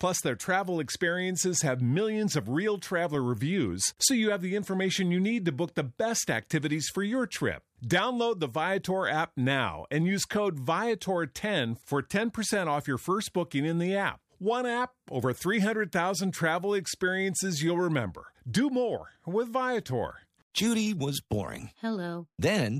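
At about 3.15 s, right after "have millions of real" and before "reviews so you have", there's a brief click peaking around -26 dBFS. That's a corrupt FLAC frame: flipped bits threw off the decoder's prediction, and the quick recovery points to a single damaged frame.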